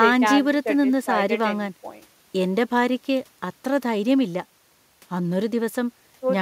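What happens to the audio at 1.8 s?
Nothing goes wrong at 1.8 s; the speech runs on without a dropout, click, or distortion there.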